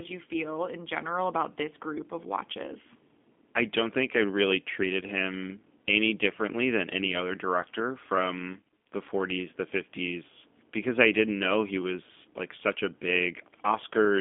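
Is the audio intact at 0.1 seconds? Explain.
No, at 0.1 s the speech is already going through G.729 codec coding, which runs the whole clip. The codec models each short frame as a vocal tract filter plus a pitch predictor and a handful of pulses, so you get that slightly rough, synthetic edge, and here it's plainly audible. The sound sits in a narrow phone band of roughly 200 Hz to 3.5 kHz with nothing above 3.7 kHz, which fits an 8 kbit/s G.729A line.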